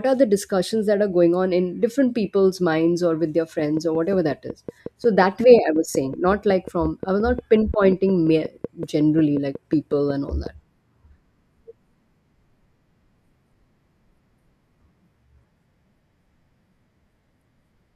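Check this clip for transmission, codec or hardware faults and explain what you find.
A train of clicks runs through the speech from 3.59 to 10.47 s. Interference from nearby equipment or a faulty connection or power supply is likely injecting a pulse 5.5 times a second at a regular pace, about forty in all. Each one sounds like a similar tick around 10 dB above the speech, carrying through the pauses too.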